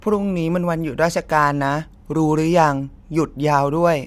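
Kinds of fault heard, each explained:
No faults detected on this speech recording.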